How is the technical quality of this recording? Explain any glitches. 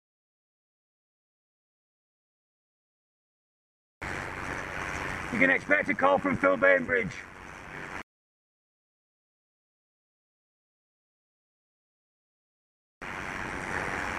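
The technical quality is compromised by a single fault. From start to finish a metallic buzz runs through the sound, a ripple near 100 Hz with level swings of about 11 dB. This is overlap-add ripple: windowed frames were rejoined with an overlap whose gains don't sum evenly, so loudness pulses once per frame.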